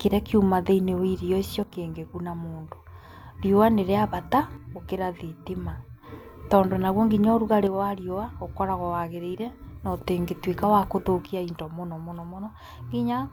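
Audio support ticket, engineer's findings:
Speech level steps down about 6 dB, abruptly, at 1.63–3.40 s, 4.57–6.03 s, 7.67–10.07 s and 11.26 s to end. Likely one channel drops out before mono sum, halving shared content. Flat step with no ramp, unlike a gain or compressor dip.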